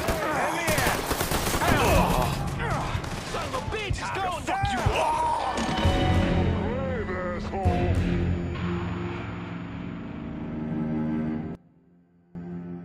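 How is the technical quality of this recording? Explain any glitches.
There is one glitch. From 11.55 to 12.35 s the sound drops by about 22 dB, with the centre nearly gone. The likely cause is one channel inverted: with one stereo side's polarity reversed, the shared content cancels when summed to mono, leaving only the faint difference between channels. On a waveform this shows as a sudden narrow section. On a spectrogram the band dims sharply.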